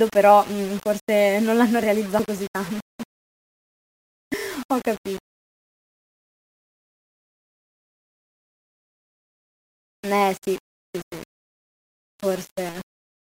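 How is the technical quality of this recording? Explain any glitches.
Technical quality is poor: the speech carries a coarse quantisation fault from start to finish. Low bit depth without dither is the likely cause: the audio seems to have been rounded to about 6 bits with no dither added, so the rounding error tracks the speech rather than forming steady hiss. The error sits only about 25 dB below the signal, making the whole clip sound grainy and rough, with quiet stretches turning gritty and the softest sounds sputtering or dropping out.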